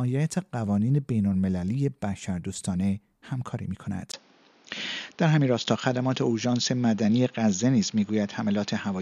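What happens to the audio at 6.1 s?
At 6.1 s the recording is inside a stretch, from 4.12 s to the end, where the input has likely switched to a poorer device. After a 20 ms gap, the sound is cut off above 6.9 kHz, turning duller at similar loudness over a faint new background noise.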